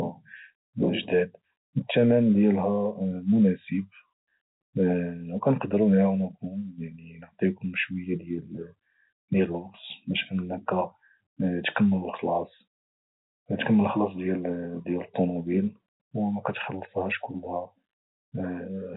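No technical faults are audible.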